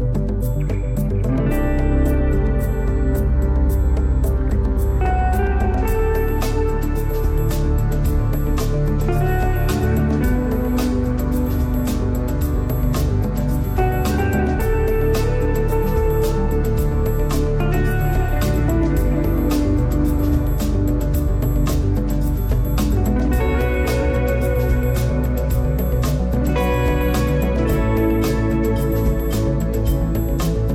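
Nothing goes wrong anywhere in the clip, so there's no glitch or technical fault to point out at any moment.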